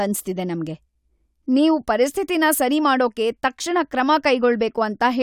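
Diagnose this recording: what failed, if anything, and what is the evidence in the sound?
Nothing stood out on listening to the recording; no failure at any stage could be heard in the sound.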